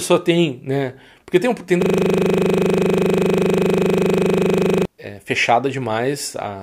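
Right after "tem tem", at 1.82 s, the speech locks into a system hang loop that lasts until 4.85 s. The machine or its audio driver stalled while the sound hardware kept replaying the same 40 ms slice of its ring buffer, so about three seconds of sound become a rigid buzz at 25 Hz. On a waveform, one identical 40 ms block repeats exactly. A spectrogram shows evenly spaced vertical stripes and a dense comb of harmonics 25 Hz apart.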